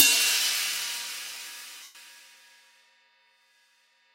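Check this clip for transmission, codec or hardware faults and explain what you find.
One transmission fault is audible. From 1.83 to 1.95 s, about 120 ms of lost LE Audio frames occur, which fits roughly sixteen frames of 7.5 ms. The LC3 decoder refills the gap by repeating the last spectrum with random signs. The sound turns into a brief noisy smear and fades toward silence. Light lossy compression is present but is not a fault.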